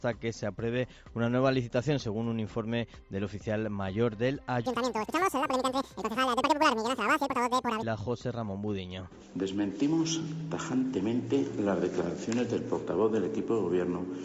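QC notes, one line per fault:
4.66–7.83 s, wrong sample rate: the sound runs at double speed and jumps a full octave (12 semitones) higher. Speed and pitch shift together by a factor of 2.0, which fits audio recorded at 16 kHz being played back at 32 kHz without conversion.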